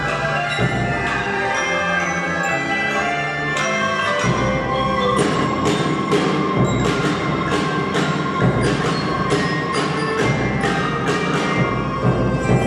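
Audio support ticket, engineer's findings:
No faults found on the signal path; level, continuity and timing show nothing to act on across the clip.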